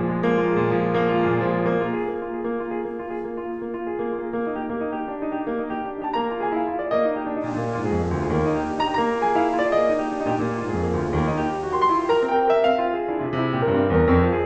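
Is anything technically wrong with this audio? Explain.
Yes, there's digital radio blending to analogue from 7.39 to 12.36 s. The receiver lost the digital stream and cross-faded over about 140 ms to the FM broadcast, so hiss rises to roughly 30 dB under the music, and level shifts about 1 dB.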